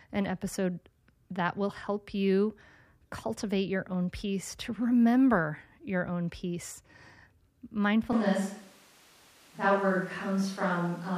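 At 8.13 s the speech suddenly goes roomy and hollow, losing its bass, and stays that way to the end. The level holds roughly steady, with background noise about 30 dB under it. It's likely a switch to a distant microphone.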